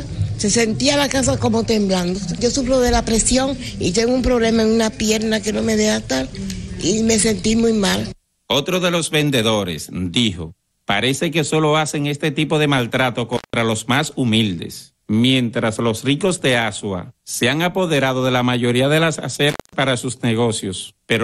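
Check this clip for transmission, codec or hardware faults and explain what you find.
Intermittent contact at 13.33 to 13.54 s and 19.50 to 19.73 s: a loose plug or cable briefly opens, dropping the audio for about 170 and 210 ms with crackle at each edge.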